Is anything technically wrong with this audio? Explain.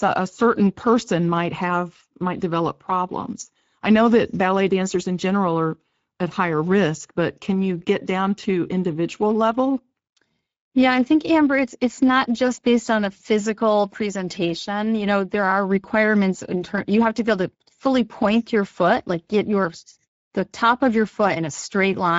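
Yes. Throughout the speech, the sound is hoarse and grainy, with nothing above 7.7 kHz. This is Speex codec damage: the CELP coder has too few bits to model the excitation cleanly, which fits a rate near 17 kbps.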